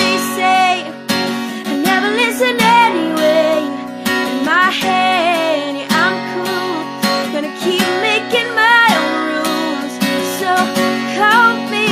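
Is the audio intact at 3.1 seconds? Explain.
Yes, at 3.1 seconds the audio plays through cleanly, with no dropout, click, distortion or other fault to be heard at that point.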